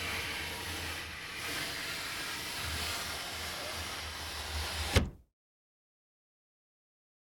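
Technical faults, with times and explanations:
No technical faults can be heard across the whole recording.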